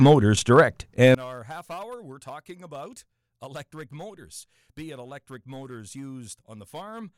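From 1.15 s to the end of the clip, the speech drops sharply, by about 24 dB. Centred sound and low end nearly vanish. What remains is a faint residue. The likely cause is one channel inverted. With one side's polarity reversed, the material shared by both channels cancels when they are summed to mono. Only the small difference between them survives.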